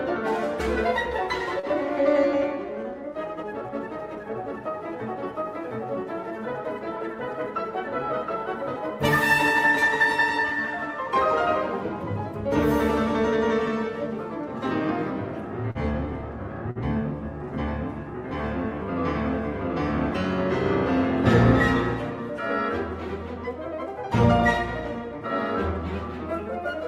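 Sounds like audio that came through a packet network with a few dropouts. There are two spots of short concealed packet loss, at 1.59 to 1.66 s and 15.71 to 15.78 s. About 40 ms of audio didn't arrive in time, and the receiver papered over it by stretching the preceding sound for roughly 34 and 40 ms before easing back in, so you get a quick smear or wobble. Then at 16.71 to 16.78 s there's a burst of packet loss. The last sound is carried on and faded for about 46 ms, and playback picks up further along with roughly 40 ms of the original gone.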